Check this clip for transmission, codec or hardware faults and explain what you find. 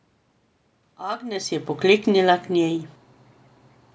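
One fault is present: automatic gain falling, from 1.82 to 3.42 s. Across that stretch the speech sinks by about 4 dB, and the room noise behind it sinks with it, so the whole scene seems to recede rather than the talker simply turning away. That shared drop points to the cause. The automatic gain control judged the input too loud, or its background noise too strong, and lowered its gain gradually over those 1.6 seconds, pulling voice and background down together. The level shift near 1 s is different, the talker moving relative to the microphone.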